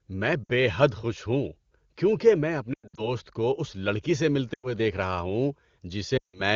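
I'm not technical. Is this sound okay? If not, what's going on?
No. The speech briefly smears, warbles or fades out at about 0.44–0.51 s, 2.73–3.12 s, 4.53–4.73 s and 6.17–6.41 s. These are lost AMR speech frames: radio errors spoiled short chunks of the call, and the decoder filled the gaps by stretching and fading the last good sound.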